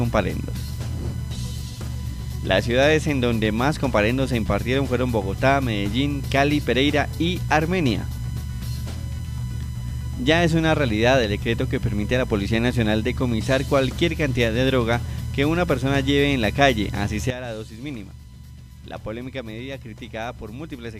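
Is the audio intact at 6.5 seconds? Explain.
Yes, the audio at 6.5 seconds is intact, with no dropout, click, distortion or other fault at that moment.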